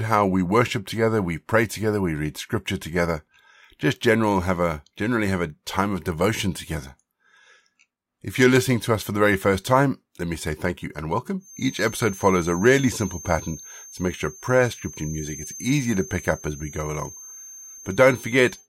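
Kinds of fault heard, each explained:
Feedback whistle: likely the speaker-to-mic loop hovering at feedback, leaving a thin 6.3 kHz whistle about 20 dB under the speech from 11.4 s, just after "say thank you and", to the end.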